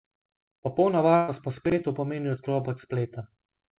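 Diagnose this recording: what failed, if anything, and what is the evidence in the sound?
Network stage, burst of packet loss: from 1.16 to 1.30 s the receiver's concealment stretches the last received sound for about 120 ms, fading it as the gap lengthens, and the sound then resumes with roughly 120 ms of the original missing.

Network or jitter-buffer stage, chunks out of order: between 1.66 and 1.72 s a 20 ms chunk plays two chunks later than it should. No audio is lost, but the reordering creates three hard joins, heard as a brief jumbled moment.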